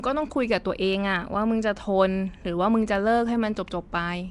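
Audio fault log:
throughout, Nellymoser compression: The speech was likely squeezed through Flash's Nellymoser Asao codec, coding fixed blocks at a low bit depth and leaving nothing above 10.6 kHz. Starved bands are filled with noise, giving a plainly audible hissy, smeared, underwater halo. The damage suggests a rate around 44 kbps.
0.12–4.29 s, clock slip clicks: Two unsynchronised clocks, drifting apart by roughly 400 ppm, likely forced a single sample to be dropped or repeated about every 50 ms. The tiny discontinuities recur steadily, dozens in all, as a soft, regular rattle under the speech.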